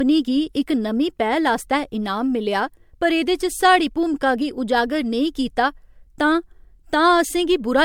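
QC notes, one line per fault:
Throughout: generation loss. The speech sounds swirly, smeared and hollow, with blurred attacks and nothing above 19.9 kHz. The likely cause is lossy coding repeated about four times, consistent with MP3 near 96 kbit/s. Each pass requantises on a shifted frame grid, so noise and spectral holes accumulate.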